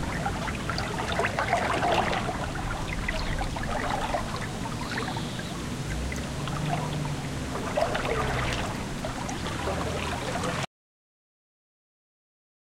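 At 10.65 s an audio dropout to silence begins: the sound cuts to silence with no room tone until the end, likely from lost input.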